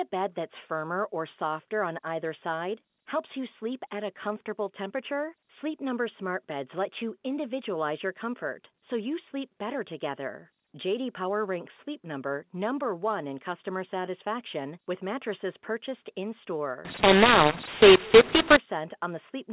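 From 16.85 to 18.57 s the telephone audio, carried as G.711 A-law at an 8 kHz rate with its usual 4 kHz ceiling, is decoded as mu-law: a mu-law and A-law mix-up. Because the two logarithmic companding curves assign different levels to the same 8-bit codes, sample values come out scrambled, some too loud, others too soft, and near-silent samples jump well above zero. The speech turns harsh and gritty, and any gaps fill with hiss.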